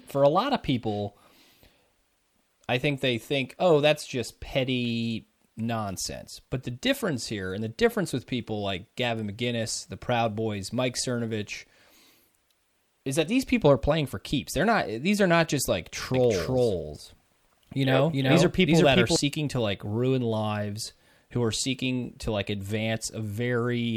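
From 16.14 to 19.16 s the speech picks up a doubled audio track. A second full-band copy trails the original by something like 0.4 s, at about the same level, so every syllable gets a dry, slapback repeat with no room tail on it. It cuts in and out abruptly at both ends. The likely cause is the same signal being captured again through a slower path, or an edit leaving two copies out of step.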